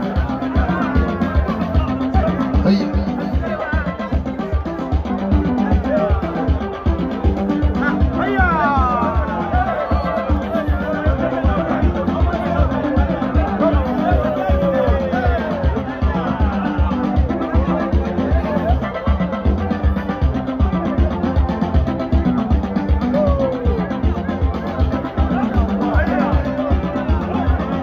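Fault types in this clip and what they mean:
Clock slip clicks: single-sample jumps roughly every 40 ms form a soft rattle throughout, likely from unsynchronised clocks; a spectrogram shows evenly spaced thin vertical lines.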